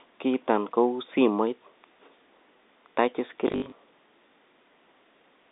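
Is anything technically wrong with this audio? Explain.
Yes. From 3.48 to 3.72 s there's a brief robotic stutter with a 50 Hz buzz. This is packet loss with the last packet repeated: about 140 ms dropped in runs up to 60 ms, replayed packets filling the gaps. The pattern fits 20 ms packets. The narrow telephone band of 200 Hz to 3.7 kHz comes from G.711 coding.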